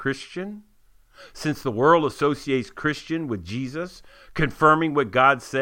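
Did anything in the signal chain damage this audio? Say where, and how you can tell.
No, nothing in the signal chain damaged this audio that I can hear.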